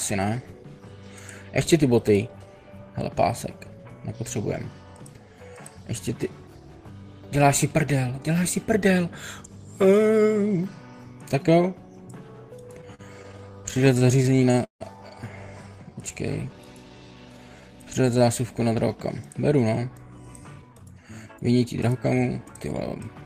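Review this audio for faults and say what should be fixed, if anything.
Repeated stalls (stutter), 12.81 to 14.82 s: packets reached the receiver late or more slowly than playback consumed them, so the jitter buffer kept running dry. In this two-second stretch there are 21 stalls. Each time, the receiver stretched the last sound to fill the hole, with the longest fill lasting 157 ms. About 409 ms of filler covers roughly a fifth of the span. Nothing is lost, but the audio drags and stutters. The fix is a larger or faster-adapting jitter buffer target on this link, and steadier packet delivery upstream.

Jitter buffer slow-down, 15.69 to 18.65 s: the buffer was low or had just raised its target delay, so the receiver rebuilt its reserve by repeating single pitch periods and small pieces of pauses many times over. This added 377 ms, and the audio plays at 88% of normal speed while keeping the same pitch. 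Sounds come out drawn-out. The buffer should be grown gradually during pauses, not stretched through continuous sound.

Jitter buffer speed-up, 20.18 to 23.22 s: the buffer then held more audio than its target, so the receiver trimmed short chunks of one or a few pitch periods again and again. It removed roughly 0.3 s in total, and the audio runs at 111% speed with pitch unchanged. The result sounds hurried. Draining excess delay more slowly, and mainly in pauses, would keep this from being heard.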